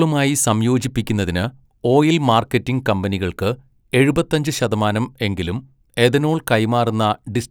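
No technical faults can be heard in this speech recording.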